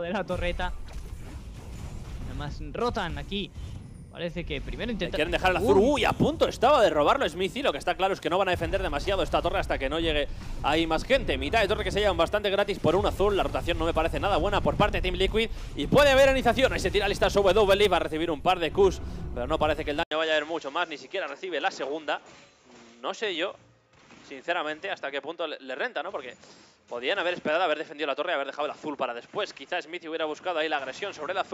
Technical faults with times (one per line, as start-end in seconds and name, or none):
20.03-31.54 input switched to a poorer device